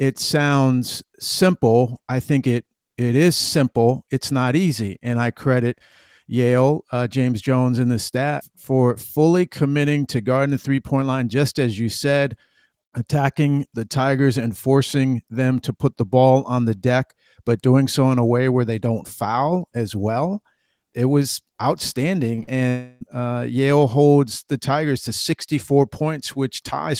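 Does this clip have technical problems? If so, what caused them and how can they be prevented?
Yes. Short concealed packet loss occurs at 22.35–22.39 s and 22.43–22.49 s, gaps of about 20 ms and 40 ms that the receiver patched by extending the preceding sound and then crossfading back into the real speech. Each is heard as a brief smear or wobble. On a spectrogram, harmonics or noise bands stretch unnaturally flat across each patch; the waveform shows a repeated, slightly smoothed cycle. A larger adaptive jitter buffer or forward error correction would prevent this.

A long network dropout spans 22.69–23.03 s, a gap of about 320 ms, most likely caused by a burst of packets that never arrived. Almost all of the gap is filled by synthetic continuation that turns into a fading buzz or hiss, with no true silence before real speech returns, and whatever was said in that stretch is gone. A spectrogram shows a frozen, gradually dimming spectral pattern; the waveform shows a looping, decaying envelope. 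A more stable connection, such as wired rather than congested wireless, with redundancy enabled, would prevent this.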